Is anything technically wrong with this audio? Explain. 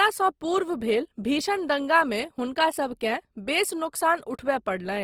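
Yes. Opus compression damage runs through the whole clip. The likely cause is Opus in its CELT music mode at a rate that fits about 24 kbps. Short of bits, it fills bands by folding or with noise, leaving the full-bandwidth speech plainly grainy, rough and noisy.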